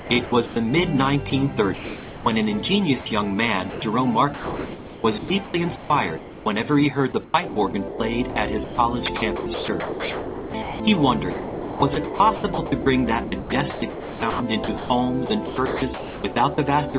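From 0 to 0.56 s, and again from 1.3 to 2.26 s, the sound is chopped by the voice detector, most likely because the sender's detector kept switching off and on. About 260 ms and 540 ms of those stretches become comfort noise of the RFC 3389 kind. Within each stretch there are several holes, not one. The sound comes through the G.711 A-law call path, with nothing above 4 kHz.

At 3.0 to 3.06 s and 3.7 to 3.82 s the sound is dropped by the voice detector instead, likely because the detector took a quiet passage for background. Each is a single gap, 60 ms and then 120 ms, filled with steady comfort noise before the sound returns. Unlike the chopped stretches, each gap is one clean switch-off with no flicker.

The chopping resumes from 4.34 to 6.46 s, where about 1340 ms is replaced, and from 7.12 to 16.94 s, where about 4340 ms is replaced. Across these two stretches the sound repeatedly cuts to comfort noise and back.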